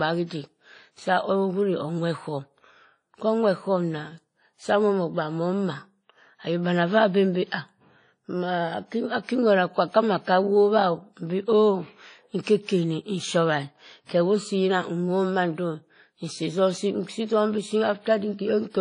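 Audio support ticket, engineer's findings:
Washy, ringing speech throughout, with hiss that swells and fades with the signal; nothing above 10.1 kHz. Likely WMA compression at a low bitrate, consistent with around 32 kbps: long transform blocks smear quantisation noise, weak components zeroed.

Short hiss smearing into a sharp onset, 12.41 to 12.47 s, spread about 56 ms. Pre-echo from the same transform codec: noise scaled for the loud attack spread across the whole block, filling the quiet gap before it and softening the attack.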